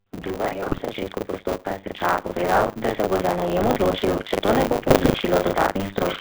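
Throughout the clip, the speech carries the signature of the GSM full-rate codec, which fits the 13 kbit/s full-rate coder. The voice is confined to a line band of about 200 Hz to 3.7 kHz, so there is no air above it. The coder models the vocal tract and drives it with a decimated pulse excitation that keeps only a fraction of the samples. This gives the voice a plainly audible buzzy, gravelly texture.

Buffer tearing runs alongside it for the whole clip. The writer and reader of the playback ring buffer have drifted into each other, so each period is partly filled with stale audio. Roughly a third of every buffer repeats sound from a few tens of milliseconds earlier, with hard splices at both edges. The result is a steady 100 Hz robotic rattle, which fits a 10 ms buffer period. It is present only while there is signal.

From 0.23 to 1.1 s, automatic gain rising lifts the level by about 4 dB. 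The gain control judged the input too quiet and ramped up gradually, so the voice and the background swell together rather than the voice alone.

Within that ramp, GSM bit errors hit from 0.62 to 0.83 s at a bit error rate of about 2.8%. Corrupted filter, pitch and gain parameters distort individual frames, and the voice breaks into squawks, pops and gargling.

A second automatic gain rising spans 1.63 to 3.11 s, again about 4 dB. This one is a slower swell of both voice and noise floor over roughly a second and a half.

GSM bit errors return from 4.84 to 5.17 s at about 2.4%. That is a longer burst of the same frame-level spectral warping and level spikes, heard as gurgling and sharp squawks.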